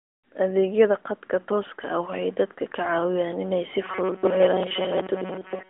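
A speech clip carried over a narrowband mobile line, its top end stopping near 3.5 kHz in the manner of AMR-NB, turns into a rigid metallic buzz at about 188 Hz from 3.84 s to the end at 5.70 s. This is robotic sound from repeated short buffers, likely caused by audio arriving too seldom, so roughly 5.3 ms chunks are replayed over and over while most of the real signal is skipped.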